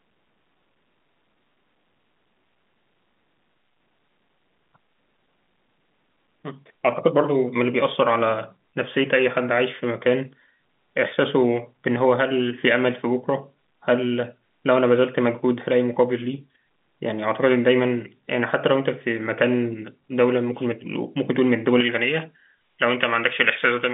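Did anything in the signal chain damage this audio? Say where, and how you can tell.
Yes. From 21.80 s to the end, pre-emphasis was left on: a J.17-style treble lift without the matching de-emphasis makes it thin and hissy, about 11 dB up at 10 kHz.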